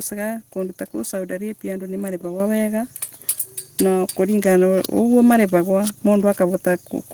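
Microphone volume stepped up at 2.4 s, just after "arabia andu": the call software judged the input too quiet and raised the microphone's gain in a single jump of about 7 dB, so the speech and the background noise become louder together, abruptly.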